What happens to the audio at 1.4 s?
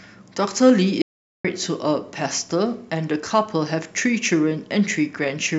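An audio dropout to silence runs from 1.02 to 1.45 s, so at 1.4 s the speech is gone. The input was likely lost briefly while recording continued writing silence, leaving about 0.43 s of dead silence with no room tone before the speech resumes mid-flow.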